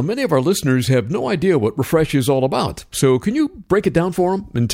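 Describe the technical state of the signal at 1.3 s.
At 1.3 s the speech signal is intact, with no audible technical fault.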